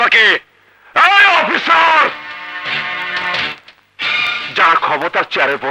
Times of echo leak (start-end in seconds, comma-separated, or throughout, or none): none